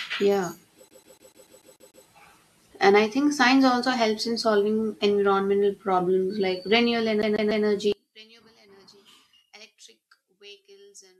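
A speech clip with two faults. The first is a CD stuck on one turn, heard from 0.88 to 2.06 s, where the same 146 ms slice repeats eight times, and again from 7.22 to 7.66 s, three repeats right after "environmental problems like renewable". Each jump carries a brief mute. The loop length stays fixed at 146 ms in both places, which sets it apart from network or buffer stutter, where repeats vary in length and timing. From 7.92 s to the end the level falls by about 32 dB, leaving only a faint residue of the speech. The likely cause is one channel inverted: with one side's polarity reversed, the centred voice cancels when the channels are summed to mono. A dropout or mute would leave silence, but here a faint trace of the difference between channels stays audible.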